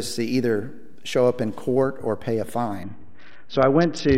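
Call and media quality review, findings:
DC offset, whole clip. Not heard as such; steady energy sits at the very bottom of the spectrum and the waveform rides off centre, costing headroom on one side. Probable component: capture or converter stage passing an uncorrected constant bias.

Bluetooth SBC bit pool drop, 2.83 s to end. Treble dulls, gritty noise rises. Probable component: congested Bluetooth link. Fits bit pool cut from 31 to 7, near 61 kbps, which starves the top sub-bands and coarsely quantises the rest.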